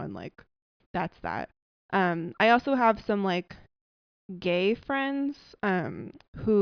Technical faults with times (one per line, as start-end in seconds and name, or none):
none